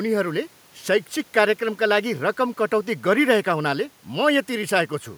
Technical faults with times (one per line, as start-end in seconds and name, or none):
none